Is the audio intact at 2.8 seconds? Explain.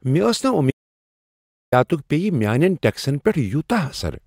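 Yes, the speech at 2.8 seconds is intact, with no dropout, click, distortion or other fault at that moment.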